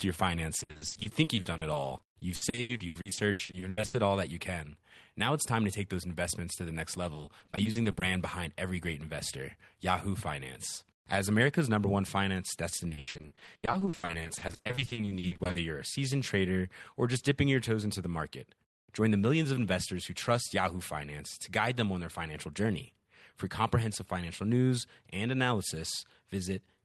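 Speech with repeated packet loss (robotic sound) at 0.59–3.95, 7.13–8.03 and 12.77–15.57 s. Gaps up to 80 ms are patched by repeating sound. It turns choppy and robotic.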